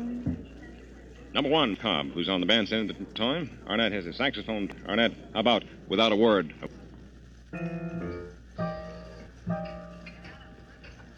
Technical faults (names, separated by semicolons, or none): damaged data in a compressed stream